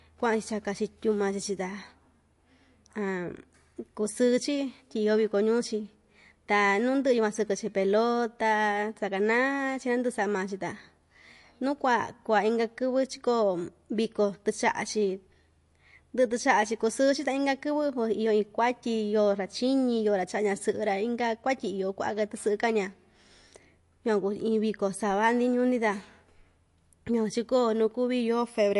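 MP3 compression artefacts run throughout the speech clip, likely from an encode at a bitrate around 48 kbps. Starved of bits, the encoder cut everything above 11.3 kHz and zeroed weak frequency lines that flicker between frames, giving a watery, swirly texture and metallic s sounds.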